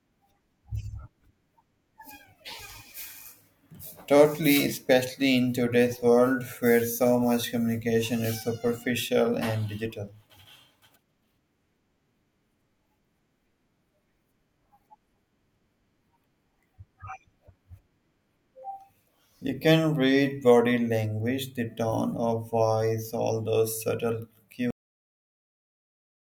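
At 24.7 s the recording has a cut-off end. The final buffers of audio were never written out or played back, so the stream stops abruptly instead of finishing. Just after "voice all those subtle", the speech is severed mid-sound, with no natural decay or trailing off. It falls straight into digital silence, and that dead, empty stretch runs for about 1.6 s to the end of the file.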